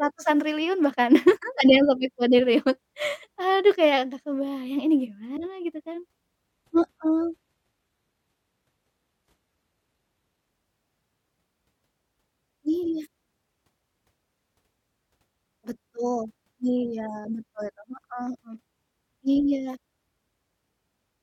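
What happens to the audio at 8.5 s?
At 8.5 s you're in the middle of a stretch, from about 6.50 to 10.50 s, where the adaptive stream dropped to a lower bitrate. The speech suddenly picks up more codec artefacts, which fits a switch down to something like a 20 kbit/s HE-AAC rendition. There's no gap at either edge. The quality just steps down abruptly and jumps back up at about 10.50 s.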